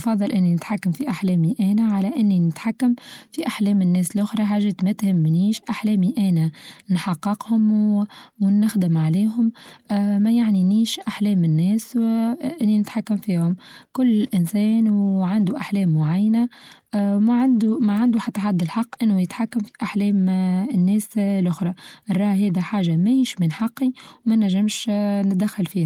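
No technical faults are audible in the speech.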